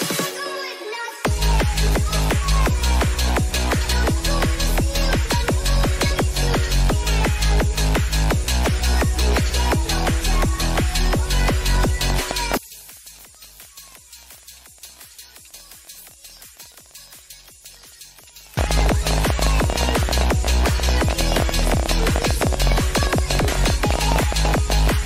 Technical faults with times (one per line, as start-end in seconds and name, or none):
12.10-24.89 train of clicks
12.57-18.57 one channel inverted